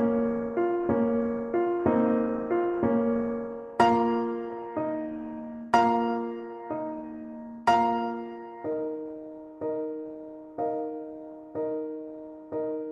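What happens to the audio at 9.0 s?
Nothing goes wrong at 9.0 s: the audio plays through that moment intact, with no dropout, click or other audible fault.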